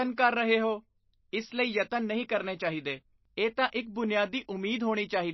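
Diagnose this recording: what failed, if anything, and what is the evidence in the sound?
The codec stage failed, most likely through MP3 compression at a very low bitrate. Across the whole speech clip the treble stops dead at 5.8 kHz, and the remaining sound is plainly damaged, with a watery, swirling texture, metallic chirps on s sounds and smeared attacks. A spectrogram would show a flat ceiling at 5.8 kHz and patchy, flickering holes below it where weak frequency lines drop in and out between frames. That degree of starvation points to a bitrate near 26 kbps.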